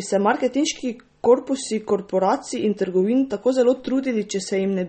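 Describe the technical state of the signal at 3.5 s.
At 3.5 s the speech sounds watery and swirly, with nothing above about 8.4 kHz, as it does across the whole clip. This is likely MP3 compression at a starved bitrate, around 32 kbps, where the encoder cuts the treble and lets weak frequency lines flicker between frames.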